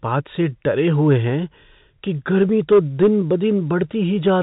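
Just after "हैं कि", from 2.41 to 3.07 s, the speech hits hard clipping: it was driven about 5 dB past full scale, so the peaks are sheared flat, giving a crackly rasp. The waveform shows squared-off tops, and the spectrogram shows harmonic smear reaching the 4 kHz telephone-band ceiling.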